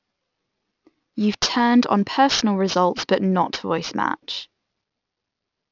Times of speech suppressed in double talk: none

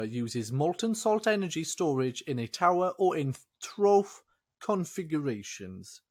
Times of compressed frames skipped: none

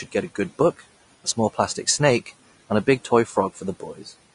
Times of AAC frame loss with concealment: none

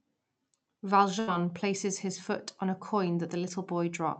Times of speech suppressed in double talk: none

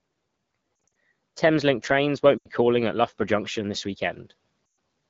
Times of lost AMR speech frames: 0.87, 2.38-2.49, 4.70

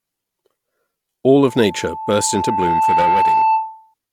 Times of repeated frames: none

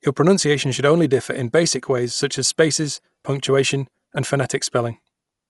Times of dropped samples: 4.83

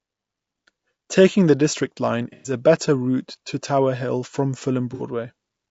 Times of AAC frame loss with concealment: 2.33-2.53, 4.94-5.02

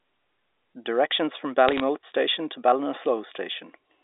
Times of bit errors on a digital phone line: 1.69-1.80

